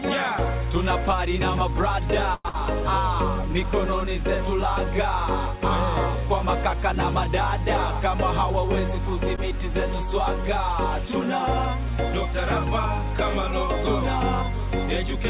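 At 2.34 to 2.47 s the sound stops moving forward for about 100 ms, including about 20 ms of near-silence. This is a call audio freeze, likely caused by delayed packets emptying the jitter buffer. The receiver extends the last sound, then resumes where it left off with nothing lost. On a spectrogram, fixed horizontal bands fade out and then the normal pattern returns.

Right after, at 2.49 to 2.55 s, comes a burst of packet loss. About 50 ms of concealment fill covers 80 ms of audio that never arrives, so the sound jumps ahead. It is heard as a brief fading buzz or hiss followed by a skip. The waveform shows a decaying, repetitive stretch and then a discontinuity. As with everything on this 64 kbps G.711 mu-law path, the spectrogram is empty above 4 kHz.

At 9.36 to 9.40 s there is a short stall from a late packet. The buffer runs dry, and the receiver holds the current sound for about 15 ms until the packet lands. 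Nothing is skipped, but one sound lingers slightly too long. This shows as a small smeared, repeated-cycle patch in the waveform.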